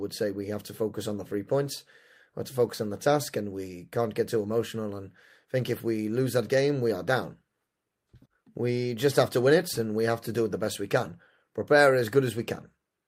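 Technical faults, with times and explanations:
No technical faults can be heard in this recording.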